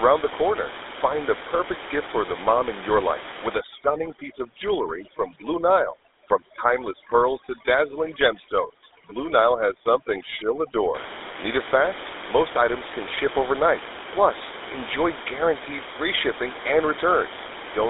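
Speech carries a buzzy, gravelly roughness and a narrow telephone band, about 300 Hz to 3.7 kHz with nothing above 3.8 kHz, throughout. This is GSM full-rate codec damage, consistent with 13 kbps pulse-excited coding. Room noise sits about 11 dB below the speech.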